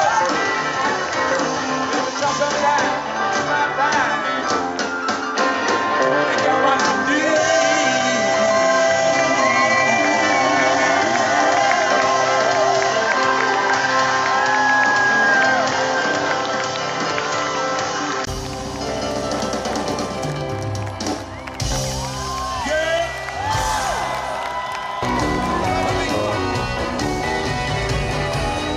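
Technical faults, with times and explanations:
0.00–18.27 s, input switched to a poorer device: the spectrogram is empty above 7.6 kHz and shows faint added hiss, then a 20 ms waveform gap and a small level jump, likely from the switch to a better input.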